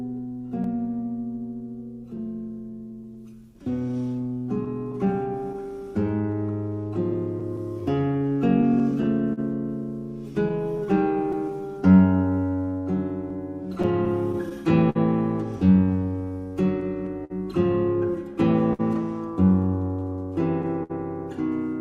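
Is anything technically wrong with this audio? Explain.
Yes. There are four related timing faults.

Clock drift between sender and receiver runs through the whole clip. The sender's clock runs about 5% slow, so the receiver's jitter buffer keeps draining and it has to make constant small adjustments to keep playback going. The result is uneven timing rather than any single obvious break.

Repeated timing corrections run from 0.12 s to 19.69 s. Because data arrives slower than it is played, the receiver repeatedly stretches the audio, playing at about 98% speed and adding roughly 0.4 s overall. It sounds like a slightly dragging, unsteady tempo with faint hiccups.

Scattered short gaps appear in four stretches: 0.47 to 1.07 s, 2.17 to 11.35 s, 13.3 to 14.97 s, and 16.8 to 18.81 s. Individual packets arrived late, and each hole was concealed by extending the preceding sound. The longest gaps are around 50 ms, heard as brief smears or ticks.

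Repeated stalls (stutter) occur from 20.0 s to 20.92 s. The buffer ran empty four times, and 96 ms was filled in total, the longest stall lasting 62 ms. The receiver held the last sound each time, so the audio stutters and drags there while nothing is actually lost.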